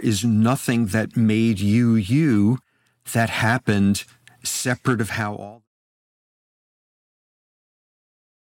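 Nothing here stands out as a technical fault; the speech just eases out in a gentle editor-style fade that begins around 5 s and is finished by 5.68 s, with no click or hard edge at the end.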